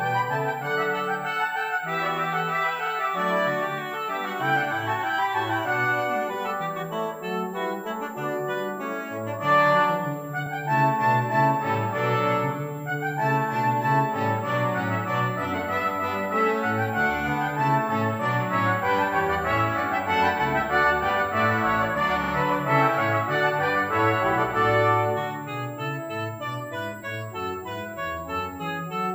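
From start to finish a thin, high whistle sits under the audio, wandering between 7.27 and 7.72 kHz at roughly 30 dB below the main signal. This is switching supply whistle: a switching power supply running in an audible burst mode or beating with another supply, its frequency shifting as the load changes. On a spectrogram it appears as a narrow horizontal line near 7.5 kHz that drifts slowly up and down across the whole clip.

At 2.86 s a block of 42.7 ms plays twice, producing a brief stutter. This is repeated frames. Compressed frames were sent or written more than once, so the decoder played the same slice of audio again. At 10.45 s a shorter 21.3 ms block repeats once, which points to a codec frame of about 21 ms. At 22.23 s a 42.7 ms block plays three times, giving a triple stutter. Together the repeats add about 149 ms to the running time. On a waveform each one shows as an identical short segment copied side by side. 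On a spectrogram the repeated slice appears as matching columns placed next to each other.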